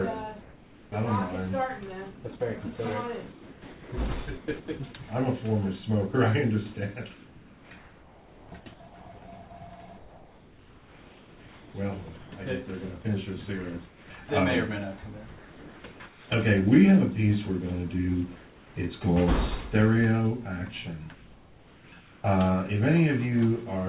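From 0.42 to 4.68 s the background behind the sound turns into a flat, featureless hiss, with its natural detail gone. This is comfort noise in place of the background. The sender likely stopped transmitting during what its voice detector judged to be silence, and the receiver filled the gap with synthetic noise shaped roughly like the real background. Similar stretches follow at 7.14 to 8.52 s, 9.98 to 12.32 s and 13.88 to 16.3 s.

Right at the end of the first stretch, from 4.6 to 4.68 s, about 40 ms of actual sound is swallowed by that same steady noise before the sound resumes. This is sound dropped by the voice detector. The detector likely mistook a quiet onset or tail for background, cut transmission, and let comfort noise stand in until it triggered again.

The steady comfort noise returns at 18.36 to 18.76 s, sitting about 3 dB below the real background, which is itself about 27 dB under the loudest parts. 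It appears once more from 21.14 to 22.24 s. Throughout, the call path shows nothing above 4 kHz, which fits G.711 telephone coding.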